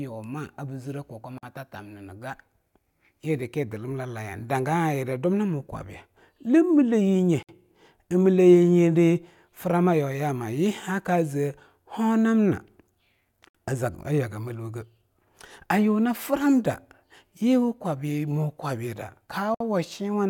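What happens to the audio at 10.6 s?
Nothing goes wrong at 10.6 s; the speech runs on without a dropout, click or other fault.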